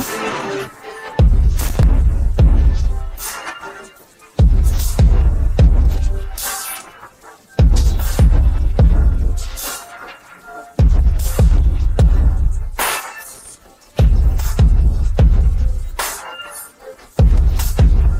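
A short, irregular burst of crackle and scratching breaks into the sound from 1.61 to 1.83 s, and a second, slightly briefer one follows from 13.32 to 13.50 s. Both are loose connector crackle: a worn or dirty contact in the signal path is shifting, so the connection makes and breaks many times within each fifth of a second, chopping the audio into fragments and producing the ragged, uneven texture instead of a clean click.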